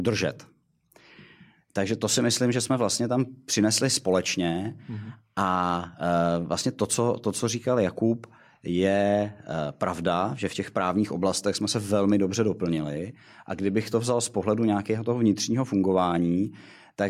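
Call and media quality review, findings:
No audible faults found.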